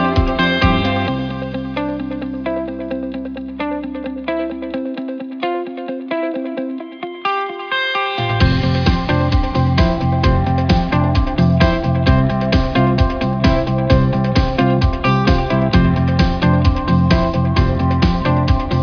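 No faults are audible anywhere in this clip.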